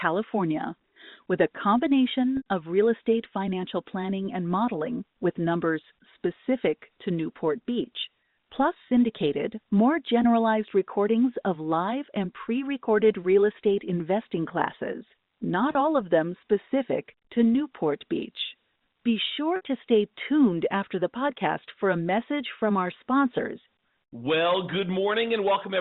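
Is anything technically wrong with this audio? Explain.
Yes. There is packet loss with pitch repetition at 2.37, 8.88, 15.72 and 19.56 s. Lost audio, about 90, 30, 30 and 60 ms, was bridged by repeating the last pitch period. The two 30 ms gaps sound briefly held and buzzy. At 2.37 and 19.56 s the held sound lasts longer and starts to fade. The sound is narrowband G.711 telephone audio, with nothing above 4 kHz.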